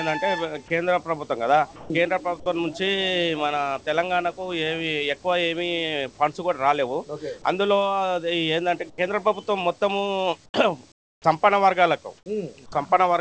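At 1.76 to 1.90 s, about 140 ms of the sound is dropped, likely by the sender's voice detector mistaking a quiet stretch for background. Transmission stopped, and the receiver substituted comfort noise, so the material in that gap is replaced by a flat hiss until the detector re-triggers and the real signal resumes. The content simply vanishes mid-flow rather than fading, leaving a short, featureless patch.

Comfort noise in place of the background follows at 8.90 to 8.98 s, 10.46 to 10.54 s, 10.92 to 11.24 s and 12.18 to 12.26 s. In these pauses the sender likely went into discontinuous transmission, and the receiver generated synthetic noise shaped only roughly like the real ambience. The real background is traded for a smooth, static hiss that sits lower than what surrounds it, by about 8 dB in the first two, about 18 dB in the longest (320 ms) stretch, and about 5 dB in the last.

At 11.22 to 11.24 s, the end of that long pause, the onset is clipped by the voice detector, which was likely slow to register the returning sound. 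The first 20 ms were never sent, so comfort noise sits where the soft attack should be and the sound starts abruptly. The band limit throughout, with nothing above 8 kHz, fits a wideband call codec.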